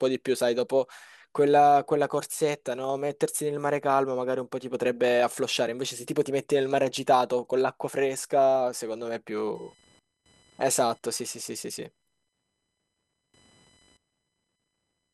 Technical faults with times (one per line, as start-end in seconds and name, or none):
9.55-15.14 computer activity noise